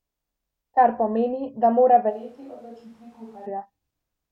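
Right after "pomeni da mora", from 2.12 to 3.45 s, there's a switch to a distant microphone: the speech goes hollow and roomy, roughly 10 dB quieter, likely a camera mic.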